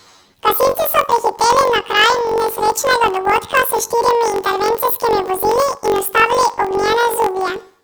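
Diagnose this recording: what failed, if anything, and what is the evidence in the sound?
The sample-format conversion stage has a channel-layout mismatch: planar audio is being read as interleaved throughout. The speech plays an octave high with a buzzing flutter at 46.9 Hz, matching 21.33 ms blocks (which fits 1024 samples), each replayed at double speed as left then right.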